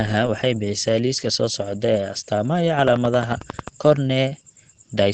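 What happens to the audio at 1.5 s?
The speech at 1.5 s carries the same Opus voice compression heard across the whole clip. The SILK coder models the voice through linear prediction and codes its excitation coarsely. Nothing is left above about 8.9 kHz, so the top of the band is gone. The damage is plainly audible. The voice sounds muffled and hoarse, with a faint robotic edge. This fits a low bitrate of around 12 kbps.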